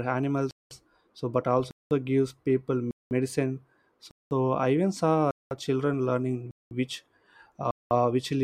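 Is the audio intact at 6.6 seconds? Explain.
No: a 200 ms hole of silence breaks the speech from 6.51 to 6.71 s, a gap between chunks where silence was left at the join between 1-second blocks.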